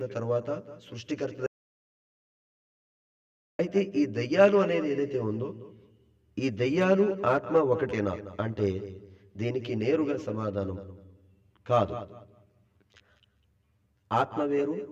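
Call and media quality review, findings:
Channel delay (comb filtering), entire clip: hollow, phasey tone. One channel lags the other by around 10 ms before the mono sum. Cancellation notches start near 50 Hz and repeat about every 100 Hz. Spectrogram: fixed, evenly spaced horizontal dark stripes.

Audio dropout to silence, 1.46 to 3.59 s: audio cuts out abruptly for about 2.1 s, then resumes mid-flow. Likely an input loss upstream, with the recorder writing silence. Waveform: flat, near-silent line. Spectrogram: blank vertical gap, no room tone.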